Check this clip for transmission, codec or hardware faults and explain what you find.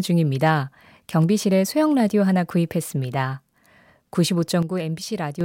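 One fault is present in the speech. Sudden gain jump, 4.63 s to 5.41 s: the level drops abruptly by about 7 dB, with voice and background noise falling together, then returning. The likely cause is a digital gain change applied from one sample to the next without a ramp.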